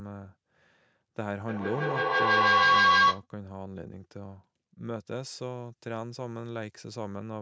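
A speech recording, band-limited to 8 kHz by ordinary call microphone processing. From 1.48 to 3.27 s there is feedback echo between two devices. The sound keeps returning at roughly 150 ms intervals. Each pass is thinner and more ringing. The repeats build instead of fading, peaking about 13 dB above the speech. Two devices in one room share the call. One plays the other's audio, and that microphone picks it up again. Neither echo canceller can remove it.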